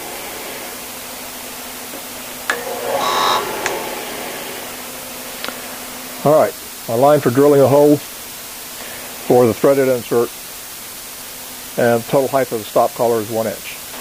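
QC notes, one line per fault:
Throughout: low bit depth with dither. A constant, even hiss sits under the whole clip at roughly 15 dB below the signal, and it doesn't change with the material. The sound was rounded to very few levels, which fits about a 5-bit word length, with dither added beforehand so the rounding error becomes steady white noise rather than distortion. That is why the clip carries this noise floor but no grit or crunch.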